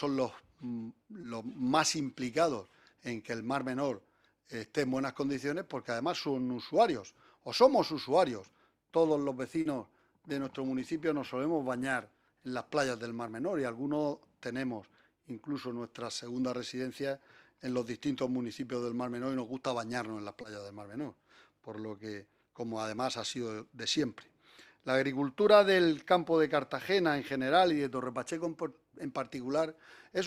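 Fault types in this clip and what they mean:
Short concealed packet loss: brief stretches of the stream arrived too late to decode, so the receiver extended the preceding sound to fill each gap, then crossfaded back into the real signal. Here the gaps are about 20 ms at 1.21 s, 40 ms at 9.61 s and 20 ms at 20.41 s. Each is heard as a tiny smear or wobble. On a spectrogram the preceding sound runs unnaturally flat across each gap, and the waveform shows it smoothly blended back into the real signal.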